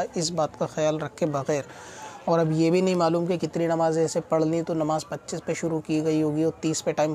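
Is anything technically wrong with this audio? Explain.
Yes. From about 4.55 to 5.73 s there is a block size mismatch (truncated): one stage hands on longer blocks than the next stage takes in, so the tail of every block is discarded. This is heard as a steady buzz at about 92 Hz, the block rate, while the sound keeps its normal pitch and here runs at 1.0 times normal speed. A regular rate-locked buzz with no pitch shift marks it apart from resampling errors or random dropouts.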